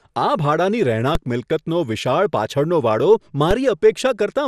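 Throughout the speech, the audio shows the marks of MP2 compression, likely from encoding at a low rate; the damage fits something near 80 kbps. Starved of bits, the MPEG Layer II coder switches off its upper sub-bands and quantises the remaining ones coarsely, so the top end keeps dropping in and out. The result is a dull, muffled sound carrying a gurgling, grainy distortion, plainly audible across the whole clip.

At 1.15 s the waveform's zero line suddenly jumps: a DC step, as if an offset had been switched into the signal path. The new offset does not hold. It bleeds away through a 20 Hz high-pass, so the jump is heard as a brief low thump while the speech continues unchanged. The same DC step recurs at 3.51 s, again a single low thump that fades as the offset drains away.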